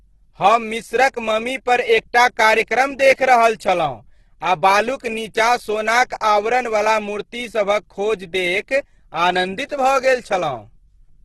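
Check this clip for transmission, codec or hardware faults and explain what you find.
One codec fault runs through the whole clip. Across the entire speech, the sound is rough and grainy and stops dead above 12.2 kHz, likely from Opus compression at a very low bitrate. Starved bands get filled with folded or noisy content, not holes, so it sounds grainy rather than having MP3's swirling.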